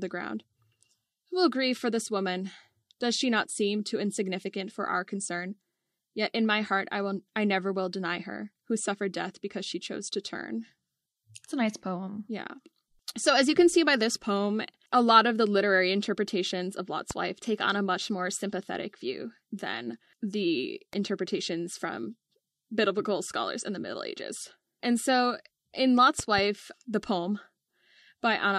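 Loud pops hit this speech recording at 17.11 s, a single pop just before "wife take on a", and 26.19–26.41 s, a double pop between "so in" and "the poem", each about 10 dB above the speech. They are likely voltage pulses from a switch, plug or static.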